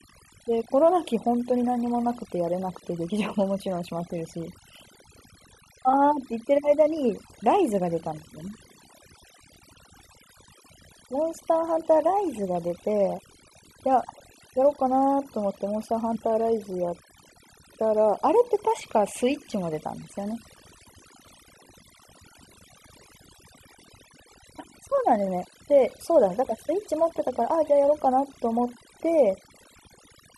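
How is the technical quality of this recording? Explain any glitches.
The technical quality is poor: heavy noise processing runs through the whole speech clip, and the audio briefly jumps ahead three times.

Overdone noise removal: throughout, a noise reducer set far too strong cuts frequency bands it mistakes for noise, leaving near-silent gaps with twinkling specks.

Compressed frames skipped: at 13.18, 16.15 and 25.26 s, the audio jumps ahead by about 70, 40 and 100 ms. These jumps are whole multiples of roughly 21 ms, which points to missing or rejected compressed frames.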